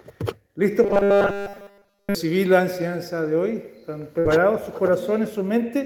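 From 0.84 to 2.15 s the sound turns into a rigid, metallic buzz fixed at 200 Hz that persists through the whole stretch. This is robotic sound from repeated short buffers, likely caused by audio arriving too seldom, with roughly 5 ms chunks replayed. Unlike a held concealment tone, it keeps loosely tracking the sound's shape.

At 4.19 to 4.27 s a burst of packet loss occurs. The last sound is extended and faded for about 55 ms, then playback resumes with about 60 ms skipped. This is a single short dropout, not a sustained pitch imposed over a long span.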